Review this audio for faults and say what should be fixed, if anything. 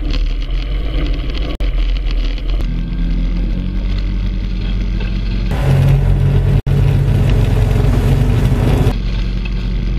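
The sound drops out abruptly at 1.55 to 1.60 s and at 6.60 to 6.67 s. These are gaps at joins of encoded pieces, where leftover encoder delay and end padding leave silences of about 52 ms and 66 ms. Trimming each piece's encoder delay and padding before joining, or encoding the whole thing in one pass, prevents this.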